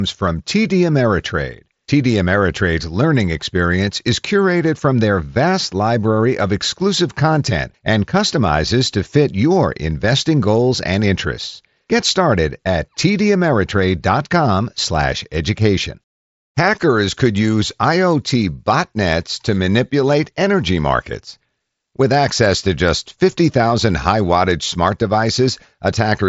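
Nothing stood out on listening to this speech recording, which comes through a Bluetooth mSBC headset link that leaves nothing above about 7.7 kHz.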